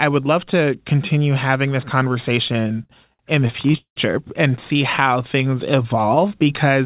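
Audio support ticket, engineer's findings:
Repeated stalls (stutter), 2.48–3.99 s: about 15 short hitches, longest 188 ms, roughly 29% of that span concealed. Jitter buffer underruns repeat the last sound. Waveform shows smeared, repeated segments that fade in the longer gaps.

Jitter buffer slow-down, 5.03–6.45 s: drawn-out sounds at unchanged pitch, about 89% speed, 161 ms added. Repeated pitch periods appear on the spectrogram as stretched harmonics. Narrowband band-limit at 4 kHz, consistent with G.711.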